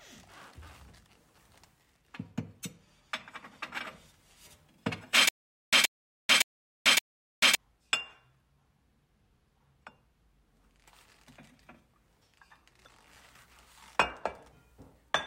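From 5.29 to 7.55 s, a stutter with silent gaps: a 126 ms burst repeats four times every 566 ms, with 440 ms of digital silence between. This is likely a stalled stream replaying its last fragment, and the repeated burst distinguishes it from a plain dropout.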